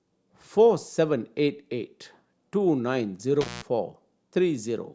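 At 3.41 s the speech drops out suddenly. This is an intermittent contact fault. A loose cable or plug briefly lost its connection, and the signal path opened. The gap lasts about 185 ms, and the sound returns by 3.62 s. Crackle marks both edges, where the contact broke and then remade. While the line is open, a faint hiss remains. The result is an abrupt, scratchy hole in the speech.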